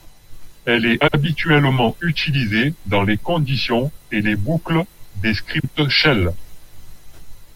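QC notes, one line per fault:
1.01–1.15 s, frames out of order: a brief garbled flutter. Two adjacent blocks of about 64 ms each, which fits runs of three frames, were decoded in reverse order, so the stretch plays with its halves exchanged but loses no time.
5.59–5.69 s, frames out of order: just after "et les boucles des", a shorter flutter. Two neighbouring blocks of about 43 ms each, which fits runs of two frames, swapped places.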